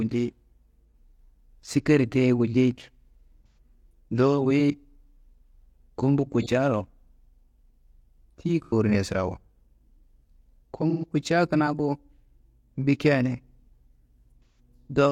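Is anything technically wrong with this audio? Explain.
Yes. AAC frame loss with concealment occurs at 0.92 s, 3.47–3.57 s, 6.41–6.46 s, 8.64–8.73 s, 10.89–11.04 s (just before "kutca kina ku"), and 14.45–14.59 s. Chunks of the coded speech went missing, and the decoder rebuilt each gap from the last spectrum it received. The gaps last about 43, 85 and 128 ms, which fits the loss of one, two or three AAC frames. Each one is a short smeared, noisy or phasey patch where the speech loses its definition.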